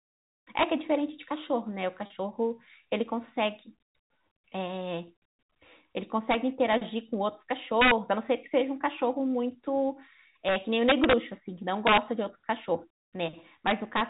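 Speech over a telephone-band channel, consistent with G.711 mu-law coding at 64 kbps, is broken by integer overflow at 0.59–0.63 s, 6.31–6.34 s, 6.73 s, 7.81–7.91 s, 10.49–11.13 s, 11.87–11.98 s and 13.67–14.01 s. On these loud stretches the signal exceeds the integer ceiling by about 1 to 4 dB. Instead of being limited, each peak wraps to the opposite extreme of the range, producing hard, violent cracks that are far harsher than clipping. The long run near 10.5–11.1 s is the most sustained. Packet loss with pitch repetition occurs at 2.06–2.10 s, where 40 ms of audio is missing, which fits two lost 20 ms packets. The receiver fills the hole by repeating the last pitch period and fading it. Because the loss is short, it comes across as a brief, slightly buzzy hold on the sound rather than a dropout to silence.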